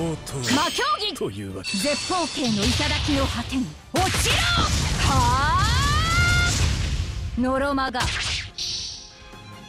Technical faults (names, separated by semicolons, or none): repeated buffer